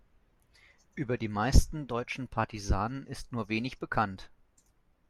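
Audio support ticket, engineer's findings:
Listened through the speech recording and found nothing to flag, so no faults to report on this one.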